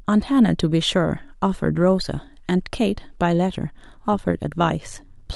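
From 4.12 s to the end of the speech, an overlap-add ripple sets in: the signal was processed in windowed frames that were rejoined with an overlap whose windows do not add up to a constant gain, so the level dips and recovers once per frame. The swing is about 6 dB, around a hundred times a second, giving a fast, buzzy, robotic flutter. A waveform shows a regular scalloped envelope, and a spectrogram shows evenly spaced vertical banding.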